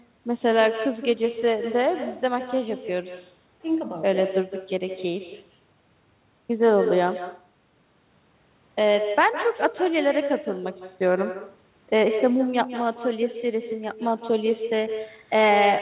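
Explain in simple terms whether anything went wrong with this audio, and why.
Every sentence in the speech is trailed by a fainter, thinner copy of itself, arriving a split second later, around a sixth of a second, for the whole clip. This is echo with no canceller: the far end was playing the call through a loudspeaker, their microphone picked it back up, and nothing filtered it out, so the talker's own voice returned after travelling there and back. The narrow, telephone-like tone comes from the call link itself.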